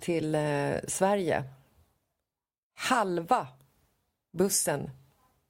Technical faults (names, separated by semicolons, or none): corrupt frame decoded